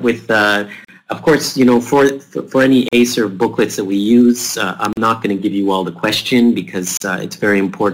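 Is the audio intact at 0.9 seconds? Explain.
Yes, but only just. A gap at a join of encoded pieces silences the sound from 0.85 to 0.88 s, about 38 ms. Encoder start delay and last-frame padding stayed in. Edges are smeared by the codec. Sound resumes where it stopped. It recurs every 2 s.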